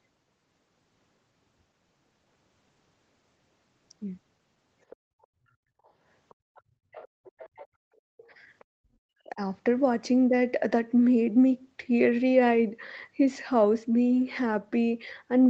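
The echo canceller likely failed to remove the loudspeaker signal from the microphone, so the other side's voice leaks through: faintly, around 25 dB down, from 4.9 to 5.26 s, as a fainter scrap, around 40 dB down, at 5.84 s, then for a longer stretch from 6.29 to 7.67 s, and briefly again at 8.6 s.

Meanwhile the canceller gated the background while the loudspeaker was active. From 5.55 to 5.81 s the room sound dips by as much as about 27 dB for roughly a fifth of a second. At 8.17 to 8.27 s it drops about 16 dB for a shorter moment, then returns.

From 8.78 to 9.41 s, speech is suppressed in double talk. Both sides talking at once likely left the canceller unable to separate the talker from the echo, so it turns the talker down very deeply, by as much as about 40 dB.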